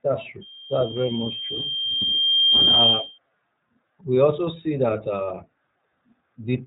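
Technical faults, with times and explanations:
throughout iLBC codec: independent 30 ms frame coding, fitting the 13.33 kbps mode, cuts off above 3.8 kHz and leaves speech plainly rough and synthetic.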